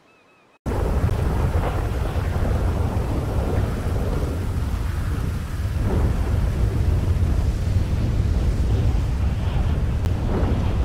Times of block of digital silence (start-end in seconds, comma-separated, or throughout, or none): 1.10, 10.05